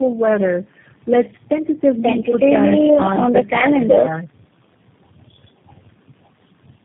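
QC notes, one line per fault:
Throughout: tandem speech coding. The speech sounds rough, muffled and warbly, with nothing above 3.7 kHz. It fits a chain of four low-rate speech codecs in a row, such as G.726, GSM full rate, AMR-NB and finally G.729A, joined by plain telephone-band links. At each border the signal was decoded and coded again. Each coder adds its own errors on top of the last one's, so the damage builds up.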